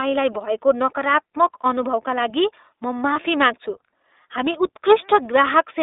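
From the start, the whole thing has gone through the iLBC codec, and the damage is plainly audible. The band sits roughly between 300 Hz and 3.7 kHz, so there's no air on top and the low end is thin. The voice has that slightly rough, synthetic edge you get when each short frame's excitation is coded on its own, and the overall character fits iLBC's 15.2 kbps mode with 20 ms frames.

Then come two lost iLBC frames. The first is at about 1.62 to 1.66 s, right before "अनुभवका लागि म". The second is at about 3.14 to 3.17 s, just after "अनुभवका लागि म". Each gap lasts around 20 ms, which points to a single dropped packet each time. The decoder fills the hole by repeating the last pitch cycle with some noise mixed in, so you hear a brief held, faintly buzzy vowel instead of silence. Because iLBC frames don't depend on the previous one, the speech snaps back immediately afterwards.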